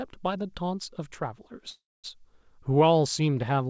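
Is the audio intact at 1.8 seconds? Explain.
No. At 1.8 s you're inside a call audio freeze running from about 1.70 to 2.06 s. The speech stalls, the last sound smears on as a short fading buzz, and then there's roughly 230 ms of silence before the speech picks up exactly where it stopped. That's most likely packets arriving late so the jitter buffer ran dry. Nothing is lost; about 340 ms of filler gets wedged in, pushing everything after it later.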